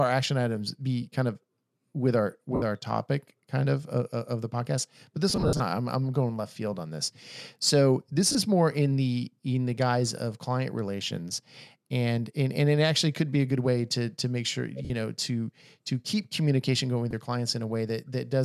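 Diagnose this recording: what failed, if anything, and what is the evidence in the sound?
Brief noisy smears replace the speech at 2.55–2.62 s (after "kind of with our"), 8.32–8.35 s, 14.85–14.91 s, 17.11–17.13 s, and intermittently across 5.30–5.61 s. These are lost LE Audio frames on the Bluetooth link. The LC3 decoder fills each gap by repeating the last spectrum with scrambled signs.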